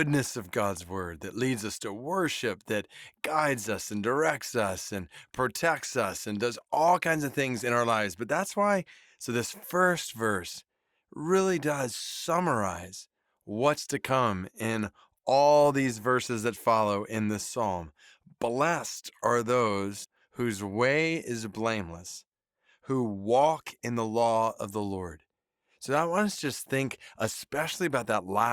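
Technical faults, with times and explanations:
20.04 s, compressed frames skipped: the speech jumps ahead about 70 ms, some seven 10 ms frames.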